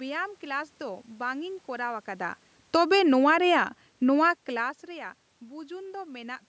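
From 2.59 to 4.77 s there's automatic gain falling: the gain control judged the level too hot or the background noise too strong and eased down about 5 dB, so speech and background sink together.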